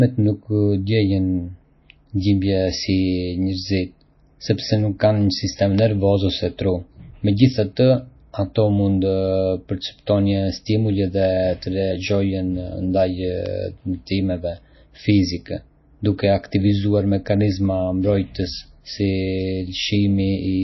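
All the way through, the speech has a watery, swirly quality and nothing above about 5.8 kHz, which is likely MP3 compression at a low bitrate, around 24 kbps. Starved of bits, the encoder drops weak frequency lines that flicker frame to frame and cuts the top end. The damage is plainly audible.

At 5.79 s, right after "nuk kanë një sistem" and before "nervor ose tru", there's a bit error spike, a sharp broadband tick where a couple of samples jumped by a power of two and snapped back. Another single-sample tick turns up at 13.46 s.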